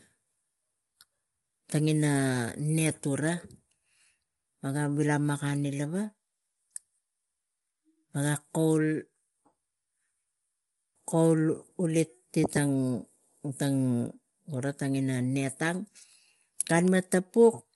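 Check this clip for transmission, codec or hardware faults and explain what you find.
There's one fault, and it runs through the whole clip: low-delay AAC compression, most likely AAC-ELD of the video-call kind. The speech sounds rough and grainy, with a noisy fill between the harmonics, and nothing comes through above 11.6 kHz. Those short, low-latency frames can't resolve pitch detail well and burn bits doing it, so at a rate that fits something around 32 kbps the damage is plainly audible.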